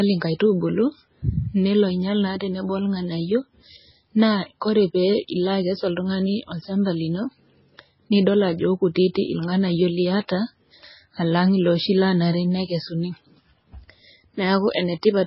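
From start to finish the speech sounds watery and swirly, with a warbling, metallic quality on s sounds and consonant attacks that smear rather than snap. Nothing reaches above 5.6 kHz, so the top end is dull and closed in. The likely cause is heavy MP3 compression. The encoder, short of bits, cut the treble at that fixed point and dropped weak frequency lines that flicker on and off between frames, which fits a very low bitrate of around 16 kbps.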